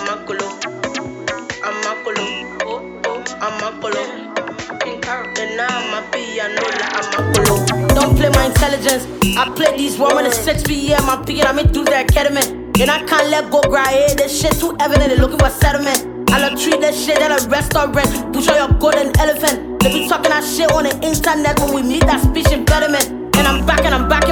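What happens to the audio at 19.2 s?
Nothing goes wrong at 19.2 s; the audio runs through that point intact.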